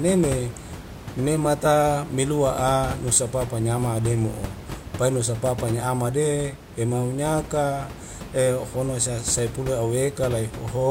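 No technical faults occur anywhere in the speech recording.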